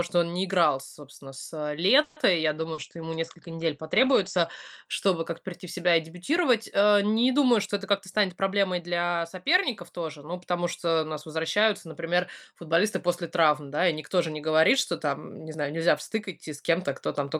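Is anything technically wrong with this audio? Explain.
Yes, there are four call-transmission faults in this speech clip.

From 2.03 to 2.19 s, right after "не играл собственно с", there is a call audio freeze. Packets were likely held up and the jitter buffer ran dry. The receiver stretched the last sound for 130 ms as it faded. Speech then resumes where it stopped, so nothing is lost, but everything after it runs 130 ms late. On a spectrogram this shows as smeared, decaying harmonics with no new onsets.

From 2.52 to 4.92 s there is a call bitrate drop. The encoder fell from 48 to 14 kbps and stayed at the lowest rate for about 2 s. It also narrowed the bandwidth from 20 kHz to 8 kHz. The speech sounds muffled and watery. A spectrogram shows a flat ceiling at 8 kHz and blotchy, coarse texture below it.

From 2.74 to 2.81 s, inside that drop, there is a short concealed packet loss. About 40 ms never arrived, and the decoder filled the hole by extrapolating the preceding sound before blending back. 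It is heard as a brief smear or wobble. On the waveform it appears as a short, overly regular stretch with a soft seam.

From 7.51 to 8.95 s, ending just before "соперников тоже ну потому", there is a jitter buffer speed-up. The buffer had built up excess delay, so the receiver cut many pitch-period slices, roughly 0.15 s in total. The speech plays at 108% speed with unchanged pitch and sounds hurried. A spectrogram shows compressed syllable spacing with normal harmonic spacing.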